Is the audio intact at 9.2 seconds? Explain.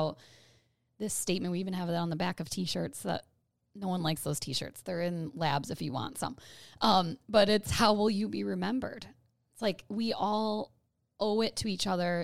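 Yes, the speech plays through 9.2 seconds intact, with no dropout, glitch or other fault at that moment.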